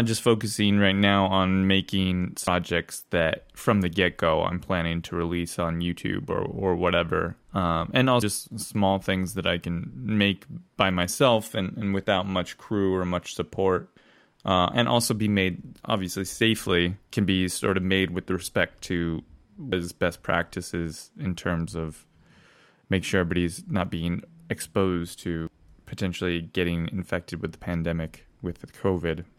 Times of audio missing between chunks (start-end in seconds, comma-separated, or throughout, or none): 2.47, 8.22, 13.97, 19.72, 25.47